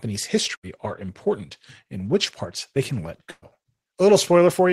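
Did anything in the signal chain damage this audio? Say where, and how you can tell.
Yes. The network stage caused a burst of packet loss twice: 0.55 to 0.66 s, before "are important and which", and 3.31 to 3.45 s, after "parts they can let". The receiver stretches the last sound and fades it, briefly to silence the second time. About 80 ms and 120 ms of speech are missing.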